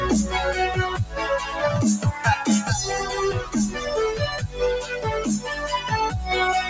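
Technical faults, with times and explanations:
Throughout: noise suppressor applied to music or sounds. A speech-tuned suppressor keeps treating sustained parts and tails as noise, so levels pump and thin out, swinging by around 10 dB.
4.42–4.57 s and 4.81–4.99 s: sound cut by the noise suppressor. The steadier material gets pulled down by about 7 dB, then about 8 dB.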